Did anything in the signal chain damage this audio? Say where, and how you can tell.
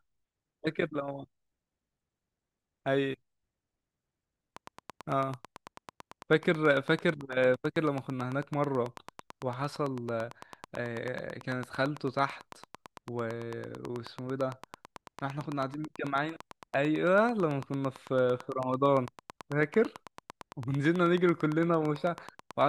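Yes. From 4.57 s to 22.62 s a train of clicks runs under the speech: about 150 near-identical pops at a steady 9.0 per second, peaking about 10 dB above the signal and still ticking through the pauses. That regular, same-shaped pulse points to something injecting energy from outside the audio, likely interference in the analogue wiring or a struggling interface, rather than random crackle from a dirty contact or buffer dropouts, which would be irregular and would interrupt the sound itself.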